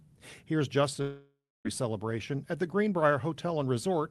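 At 1.01 s the sound stops advancing and the last moment is stretched into a buzzy, fading tail that decays into about 0.28 s of silence before audio resumes at 1.67 s, skipping roughly 0.64 s of material. This is a long network dropout, likely from packets failing to arrive for that whole span. Unlike a brief packet loss, where concealment bridges the gap almost seamlessly, this fill runs out and leaves an audible hole before the jump forward.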